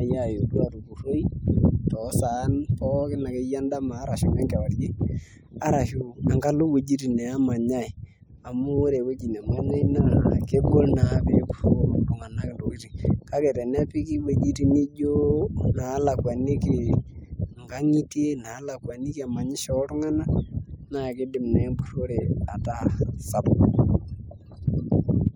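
No technical faults are audible.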